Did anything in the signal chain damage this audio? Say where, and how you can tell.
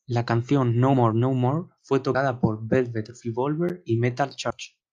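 Yes: compressed frames skipped at 0.92–0.94 s, 2.13 s and 4.49 s, a codec or storage fault. The speech jumps ahead by around 70, 70 and 100 ms, which fits a few whole frames going missing.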